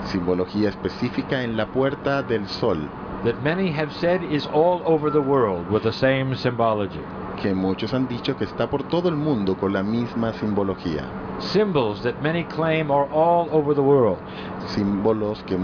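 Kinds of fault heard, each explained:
No technical faults can be heard in this recording.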